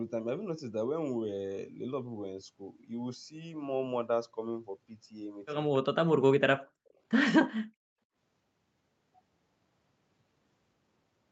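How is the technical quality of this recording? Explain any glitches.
One glitch stands out in this speech, heard over a call-style band that stops at 8 kHz. From 5.79 to 6.3 s the voice sinks and breaks up in pieces, very deeply cut for about a third of a second in total. This is likely speech suppressed in double talk, where an echo canceller could not tell the talker from loudspeaker echo and turned both down. The waveform envelope pinches nearly flat, and the spectrogram's harmonics fade into gaps.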